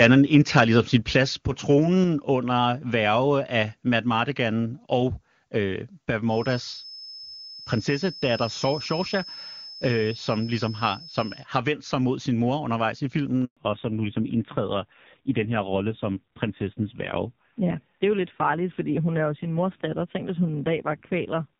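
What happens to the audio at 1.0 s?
At 1.02 s, between "ligesom sin" and "plads på", the speech and its background drop by about 4 dB in a single step. This is likely a microphone volume stepped down event, with the call software cutting the device's input gain at once.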